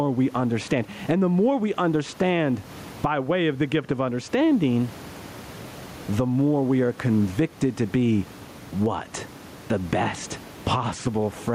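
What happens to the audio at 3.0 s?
At 3.0 s the speech is caught in gain pumping that runs through the whole clip. The room noise sits about 31 dB below the speech, and the gain swings by around 15 dB, squashing loud and soft parts closer in level. The likely cause is gain set far too high, with a fast limiter clamping it down. On the waveform, the envelope looks squashed, with loud and soft parts close in level.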